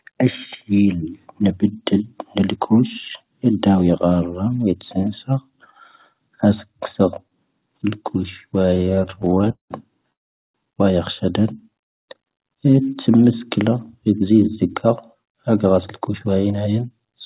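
From 8.59 to 9.71 s, late packets kept draining the jitter buffer: a repeated stall (stutter) of some two dozen concealed gaps, the longest 188 ms, filling about 40% of the span, so the speech drags and stutters.

At 10.12 s, a call audio freeze inserts 420 ms of silence before speech resumes where it stopped, likely from packets held up until the buffer ran empty.

Between 11.57 and 12.36 s, the jitter buffer slow-down repeated pitch periods to rebuild its reserve, adding 82 ms. Speech runs at 90% speed, drawn out but at unchanged pitch.

From 14.21 to 16.84 s, a jitter buffer speed-up trimmed surplus buffered audio, removing about a fifth of a second. Speech runs at 108% speed and sounds hurried, with pitch unchanged. Throughout, the G.711 call path leaves nothing above 4 kHz.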